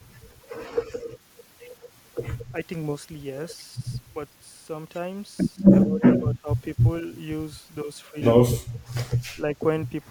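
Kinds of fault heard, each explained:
Speech suppressed in double talk: The speech dips by about 10 dB in three short stretches, from 5.83 to 6.03 s, 6.19 to 6.48 s and 9.35 to 9.43 s, and then returns at its normal level. The likely cause is an echo canceller that heard both ends talking at once and pulled the near talker down with the echo. Unlike a packet-loss dropout, the sound is turned down rather than cut out or replaced with a glitch.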